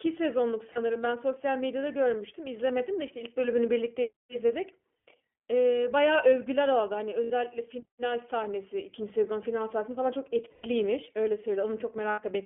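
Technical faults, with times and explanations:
Throughout: iLBC codec, a narrowband speech codec passing about 200 Hz to 3.4 kHz, giving plainly audible rough, synthetic texture, consistent with its 15.2 kbps mode.
0.72–0.79, 2.78–2.81, 5.08, 7.24–7.31, 10.50–10.66, 12.10–12.20 s: lost iLBC frames, 20–140 ms gaps filled by repeated buzzy pitch cycles, recovering almost instantly since frames stand alone.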